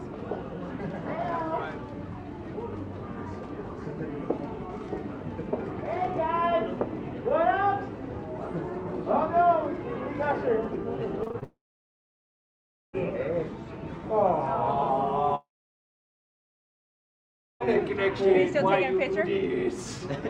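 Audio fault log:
11.23–11.43 s, repeated packet loss (robotic sound): Audio arrived with four short holes, the longest 23 ms, and the receiver filled each one by extending the sound just before it. About 80 ms of the 0.2 s stretch is patched material, around 40 percent of it, so the holes sit close together. The repeated filler gives the sound a choppy, mechanical, robotic edge, and short pieces of the real signal are missing.
11.43–12.95 s and 15.35–17.62 s, long network dropout: The sound briefly carries on as a fading smear of the last moment and then goes silent: about 1.38 s of silence in the first stretch and about 2.16 s in the second. These gaps are likely caused by a long break in the stream, about 1.5 s and 2.26 s of audio, that was never delivered. When the sound returns at 12.95 s and 17.62 s, it skips past the missing material rather than picking up where it stopped.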